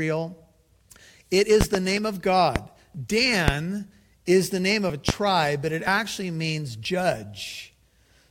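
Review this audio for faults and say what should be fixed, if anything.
Audio missing between chunks: the speech skips slightly at 0.99, 1.97, 2.95, 3.92 (just before "is the name"), 4.90 (just after "is the name"), 5.88 (just after "but it"), 6.85 and 7.83 s. Each skip drops a very short slice with no silence in its place. The steady spacing of about 1 s likely comes from a recorder working in one-second chunks and losing audio at each handover. To prevent this, use overlapping or properly double-buffered chunk handling so no samples are discarded at boundaries.

Loud pop: sharp pops sit on top of the continuing speech, with two in quick succession between 1.61 and 1.78 s and single ones at 2.56, 3.48 and 5.09 s. They peak around 20 dB above the speech, and the one at 3.48 s is nearer 25 dB. These are likely voltage spikes from a connector, switch, static discharge or driver glitch. To prevent them, secure cables and connectors, avoid switching or handling hardware while recording, and check the audio driver.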